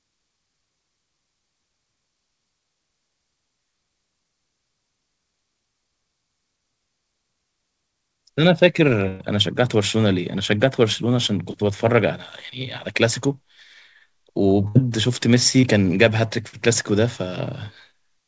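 Speech carried over a call link, with nothing above 8 kHz, which points to a wideband call codec such as G.722. Two bursts of packet loss occur, at 9.08 to 9.22 s and 14.68 to 14.77 s. About 120 ms and then 80 ms of audio never arrived. The receiver extended the last sound for roughly 117 ms and 72 ms, fading it into a held buzz or hiss, then resumed past the missing stretch. Three cases of short concealed packet loss fall at 11.52 to 11.56 s, 15.61 to 15.65 s and 16.49 to 16.55 s, losing 20, 20 and 40 ms respectively. Each hole was patched by continuing the preceding sound and blending back, so each is a brief smear or wobble in which a short consonant may be lost.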